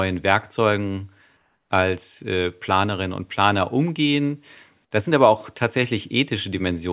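From 1.37 to 1.7 s, just before "als äh", the real background drops out for about 330 ms and a flat, featureless hiss takes over, about 3 dB quieter. That's comfort noise in place of the background, likely discontinuous transmission muting the pause, with everything sitting under 4 kHz on this call path.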